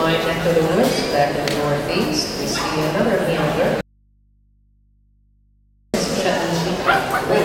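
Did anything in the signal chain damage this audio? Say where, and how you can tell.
Yes, there's an audio dropout to a faint residue from 3.81 s to 5.94 s, roughly 2.1 s long. The sound cuts off abruptly rather than fading, and what's left in the gap is mains hum sitting somewhere around 40 dB below the normal level. Then it snaps straight back. Hum in the hole rather than digital silence points at the analogue wiring, likely a connector or cable that briefly went open and left the input floating, picking up hum.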